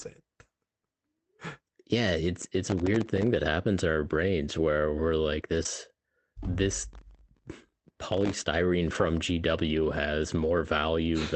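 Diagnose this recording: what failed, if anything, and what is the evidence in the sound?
Processor overload crackle shows up twice at the driver/buffer stage: 2.67 to 3.28 s, then a longer stretch from 6.93 to 8.47 s. Both are a gritty, tearing crackle riding on the speech that stops once the load eases. The machine kept missing its deadlines on very small buffers, around a millisecond and a half each, dozens of them in the first burst and something like a hundred in the second. Every miss drops a sliver of silence with hard edges, and that string of edges is the grit you hear.

There's a short concealed packet loss on the network side at 5.63 to 5.67 s, about 20 ms that didn't arrive in time. It comes across as a brief smear or wobble rather than a clean gap. The receiver covered the opening part of the hole by extending the last sound it had, following its pitch where the speech was voiced or shaped noise where it wasn't, then blended back into the real audio.

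Lost packets rebuilt from error correction occur in the same Opus path, which runs at a wideband 8 kHz audio bandwidth. The tail of that 5.65 to 5.67 s hole, 20 ms, was rebuilt from the redundant copy carried in the next packet. So was a longer patch at 8.91 to 9.01 s, 60 ms, which fits three 20 ms packets. There's no gap in either spot, but those stretches sound rougher and noisier because they're decoded from a low-bitrate backup copy.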